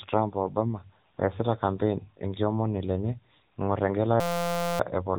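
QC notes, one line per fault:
throughout: AMR narrowband mobile codec. The speech is band-limited hard, with nothing above 3.8 kHz, giving the boxed-in sound of a 2G/3G phone call. The codec rebuilds the signal from a vocal-tract model excited by a few pulses per subframe, and at this depth of damage that model is plainly audible: a buzzy, synthetic edge on voiced sounds and a thin, processed quality overall, which fits one of the lower AMR-NB modes, around 8 kbps.
4.20–4.80 s: system hang loop. The audio locks onto a single 5.8 ms fragment and replays it about a hundred times in a row, producing a steady buzz at 172 Hz instead of speech. The output hardware kept cycling one small ring buffer while the system feeding it stalled. The loop length fits a 256-sample buffer. Roughly 0.7 s of real audio is missing, replaced by the tone.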